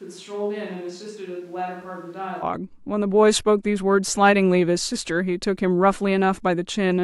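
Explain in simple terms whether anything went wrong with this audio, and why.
From the start until about 2.41 s, the speech sounds hollow, roomy and thin, noticeably quieter, with more background noise, then suddenly turns close and full. That is a switch to a distant microphone, likely because the close microphone's signal dropped out.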